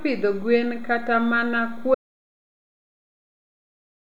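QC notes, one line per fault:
1.95 to 4.1 s, audio dropout to silence. The speech cuts off mid-flow just after "pidho gwen kata mana" and never returns. From there to the end, the signal is silent. No room tone or hiss remains, so the input itself was lost rather than turned down. The likely cause is a disconnected device, failed link or stray mute while recording continued writing silence. Whatever followed in those 2.15 s is gone.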